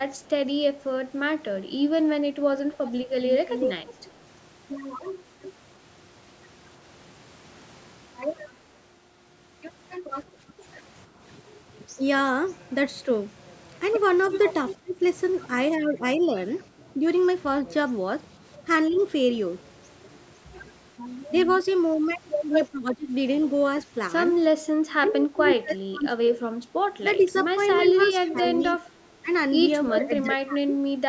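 A DC offset runs through the whole recording: a constant shift that you can't hear but that eats headroom, unlike low hum, which has pitch. From 0.22 to 5.53 s there is echo leak, a copy of the speech trailing by 344 ms at about 5 dB below it. It is most likely loudspeaker pickup that the far end's echo canceller failed to remove, and the fixed delay separates it from room reverb. At 10.32 to 10.64 s, the background is gated by the echo canceller: the room sound dips by up to about 9 dB for roughly 300 ms. The echo returns briefly at 14.53 to 14.75 s, about 10 dB down. From 14.8 to 18.99 s, speech is suppressed in double talk, likely because both sides spoke at once. The talker's own speech drops by up to roughly 15 dB for about a second in total, unlike gating, which dims only the background. Echo follows from 18.93 to 21.68 s, now about 15 dB down. Heavier double-talk suppression spans 22.71 to 30.73 s, cutting roughly 20 dB across about 3 seconds, while a faint echo about 20 dB down persists from 25.09 to 30.24 s.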